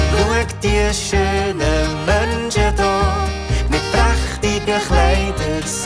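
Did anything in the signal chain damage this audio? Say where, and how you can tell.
No, nothing damaged this audio.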